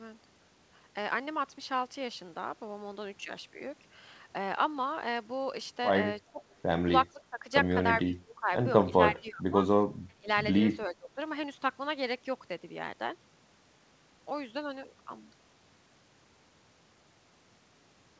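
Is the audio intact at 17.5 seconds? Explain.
Yes, at 17.5 seconds the speech is intact, carried through the WebRTC call path with nothing above about 8 kHz.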